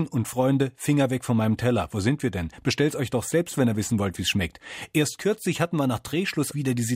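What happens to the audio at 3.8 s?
Nothing goes wrong at 3.8 s; the speech carries on intact there, with no dropout, click, distortion or other fault.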